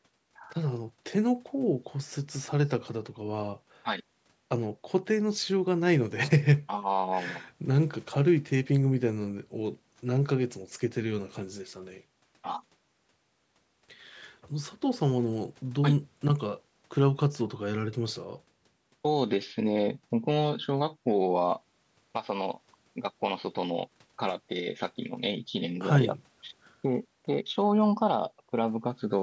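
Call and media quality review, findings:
No findings in this call and media quality review: the speech went through normal call microphone processing, with nothing above 8 kHz and the lowest bass trimmed as expected.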